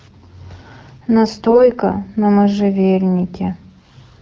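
From 1.44 to 1.69 s, AMR bit errors flip roughly one bit in twenty, scattering the excitation pulses, so the speech turns briefly hoarse and gargly.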